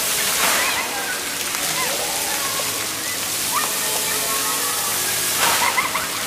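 Around 1.48 to 1.82 s there's a patch of DAB burbling. With weak reception, bit errors at a rate of well under one percent slip past the error correction and land in the MP2 audio data. The corrupted samples put short bursts of noise into individual sub-bands, so the sound picks up that bubbly, watery blipping for about a third of a second.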